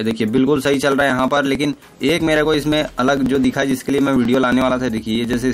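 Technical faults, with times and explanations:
0.11–5.42 s, periodic USB or driver dropouts: something stalls the bus every 0.09 s, skipping around 10 ms of audio each time, hence the steady ticking under the sound.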